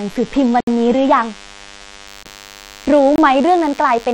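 A speech recording carries three kinds of technical fault. A DECT cordless phone buzz runs through the whole clip. A nearby DECT handset or base sends a radio burst every 10 ms, and the audio circuit rectifies it. The result is a thin, steady buzz at 100 Hz with a dense row of harmonics. It sits about 25 dB below the speech.

The opening shows an adaptive stream starting at a low bitrate. From the start to 2.07 s the treble is thin and nothing reaches above 12.3 kHz. Codec artefacts are stronger in this stretch. The player began on a cheap version of the stream to start quickly. The sound suggests something like HE-AAC at 16 kbit/s. At 2.07 s the quality jumps up with no gap, which fits a switch to a fuller AAC-LC stream near 96 kbit/s.

There are also three blocks of digital silence. The first runs from 0.60 to 0.67 s, about 70 ms, and is heard as a short hole. The other two run from 2.23 to 2.25 s and from 3.16 to 3.18 s, about 23 ms each. 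Each block drops straight to zero and back without a fade. Most likely the output buffer was not filled in time. The two shorter gaps fit a 1024-sample buffer.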